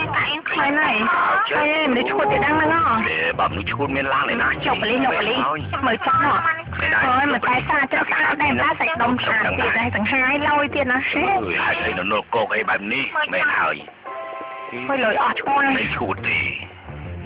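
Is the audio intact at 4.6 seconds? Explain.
Yes, the audio at 4.6 seconds is intact, with no dropout, click, distortion or other fault at that moment.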